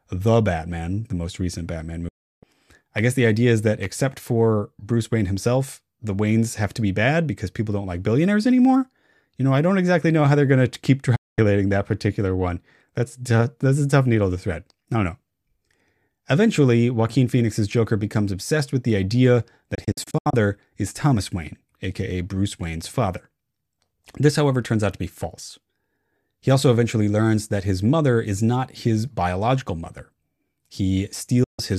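A digital broadcast dropout occurs four times: the receiver stops getting decodable frames and mutes until good ones return, and each gap is a whole multiple of about 24 ms, which fits lost frames. The speech quickly fades out over about 8 ms into silence from 2.08 to 2.43 s, from 11.15 to 11.39 s and from 31.43 to 31.59 s. Between 19.75 and 20.34 s it breaks into several short holes, the longest 72 ms.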